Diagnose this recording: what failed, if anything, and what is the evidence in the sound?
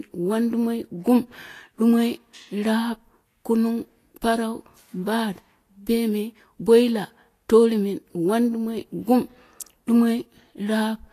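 Throughout the speech, the treble sounds hissy and grainy, consonants have a smeared, blurred onset, and nothing is heard above 14.2 kHz. The cause is likely Vorbis compression at the codec stage. The damage is plainly audible and points to a low bitrate of roughly 34 kbps. The encoder cuts off the top band and quantises the remaining high-frequency residue so coarsely that fine detail is replaced by noise of similar energy, which produces the grain.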